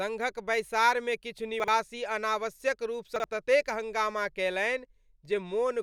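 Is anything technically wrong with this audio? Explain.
Yes. At 1.6 to 1.68 s and again at 3.16 to 3.24 s the speech briefly jumbles. These are chunks out of order: a 40 ms chunk plays one slot late, swapped with its neighbour, leaving three hard joins.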